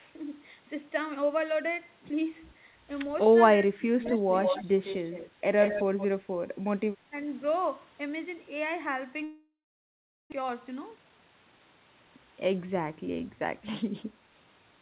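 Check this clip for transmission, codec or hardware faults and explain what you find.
Four kinds of fault are audible, on a narrowband path with nothing above 4 kHz.

Speech suppressed in double talk, at 3.26–3.30 s, 3.56–3.84 s and 7.09–7.13 s: the echo canceller likely mistook simultaneous talk for loudspeaker echo and attenuated it. The voice dips by about 5 dB, then by about 25 dB over roughly 0.3 s, then by about 10 dB.

Echo leak, at 4.01–4.21 s, 4.43–4.64 s, 4.84–5.30 s and 5.60–6.07 s: the far end's canceller likely let loudspeaker pickup through. A copy of the voice returns 156 ms late, about 10 dB down, then at equal level, then about 10 dB and about 5 dB down.

Long network dropout, from 9.24 to 10.34 s: audio likely stopped arriving, and concealment extended the last sound as a fading buzz before leaving silence. When the sound resumes, about 0.6 s is missing and the timing has slipped by roughly half a second.

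Jitter buffer speed-up, from 10.38 to 12.18 s: the receiver trimmed short pitch-period pieces to drain its excess backlog, cutting roughly half a second in all. The speech runs at 125% pace with unchanged pitch and sounds hurried.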